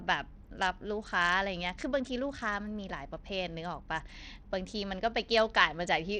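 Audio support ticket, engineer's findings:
Throughout the speech, treble flickers and drops out, with gritty noise and aliasing. Likely Bluetooth SBC compression: a starved bit pool fits a link of about 80 kbps.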